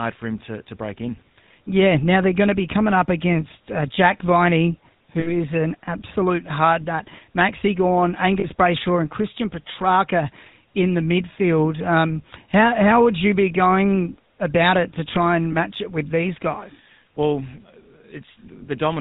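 The speech has passed through a GSM full-rate codec from start to finish. This early mobile coder models the vocal tract and drives it with a sparse, regularly spaced excitation, keeping only a fraction of the original detail, which fits the 13 kbps full-rate scheme. Nothing above 4 kHz gets through, so the speech sounds muffled at the top, and the coarse excitation gives it a plainly audible buzzy, gravelly roughness.

Three bursts of lost GSM frames follow, at 5.2 to 5.32 s, 8.4 to 8.46 s and 15.52 to 15.55 s. Each time the decoder had no valid data and filled the gap by repeating the parameters of the last good frame. Instead of silence, the sound briefly hangs on as a rough, metallic ring. The first event is the longest, and the last is only a short blip.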